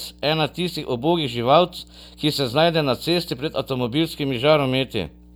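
Mains hum runs from start to finish under the speech: a steady 60 Hz tone with a few low harmonics, sitting roughly 25 dB below the voice. Power-line current has leaked into the signal path, likely through a ground loop or a nearby transformer.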